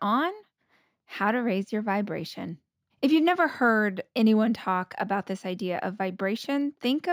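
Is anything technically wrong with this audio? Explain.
Yes. Imaging from linear upsampling runs through the whole clip. The rate was raised by joining samples with straight lines, which fits a 16 kHz original raised to 44.1 kHz. That interpolation filters poorly. The top of the speech band sounds dulled. A faint mirrored copy of the spectrum sits between 8 kHz and 16 kHz, roughly 35 dB below the speech. It adds a light metallic shimmer, clearest on sibilants.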